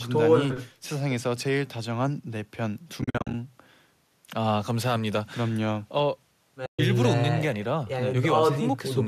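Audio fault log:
3.02–3.34 s and 6.66–6.79 s, AAC frame loss with muting: dropped frames are zeroed, leaving soft-edged holes. The first removes about 210 ms in short gaps over 320 ms, the longest around 50 ms. The second is one 130 ms hole. The fade lengths fit 10 ms frames, likely from low-delay AAC.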